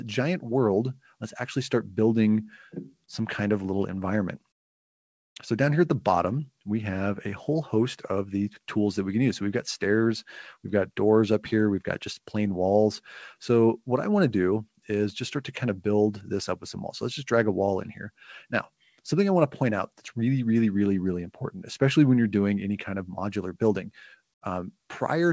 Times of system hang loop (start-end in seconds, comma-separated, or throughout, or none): none